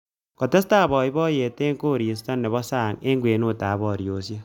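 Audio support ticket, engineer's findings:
Went through the whole speech clip and nothing turned up, so there's no fault to log here.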